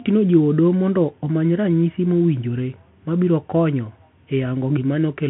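Throughout, the speech carries the sound of a Bluetooth CVSD headset codec. It passes roughly 150 Hz to 3.4 kHz, with nothing above 3.8 kHz. One-bit delta steps, fitting a 64 kbps link, lag on sharp peaks. Sibilants turn gritty over a grainy hiss.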